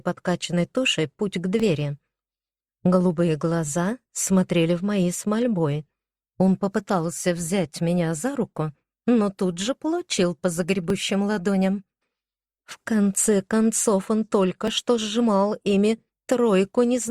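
Small skips forward in the audio occur at 1.60, 10.90 and 14.68 s, each losing a few milliseconds, most likely a dropped buffer (overrun) splicing the signal edges directly together.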